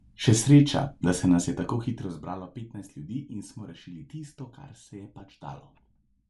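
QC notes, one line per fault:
Throughout: Bluetooth LC3 compression, plainly audible. The speech carries a breathy, grainy edge in the upper band where spectral detail has been thinned and replaced with noise. This most likely comes from LC3 coding, and the damage fits something like 48 kbps with 7.5 ms frames. Unlike a plain low-pass, the top end still has energy, but it sounds hissy instead of clear.
1.3 to 2.74 s: zipper noise, starting right after "sreča da se" and ending before "ljudi in smo rešili". The level drops by roughly 15 dB in coarse steps, about 50 of them a second, with no smoothing between them. Each step leaves a small click, so the fade ticks and zips.
5.19 s: lost LE Audio frames, just after "tisto kar se je". One 7.5 ms frame dropped and the decoder filled the gap by reusing the previous spectrum with randomised phase. It is heard as a brief noisy smear in the voice, not a hard dropout to silence or a click.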